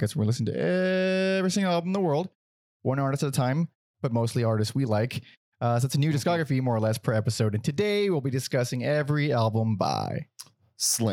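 No technical faults are audible.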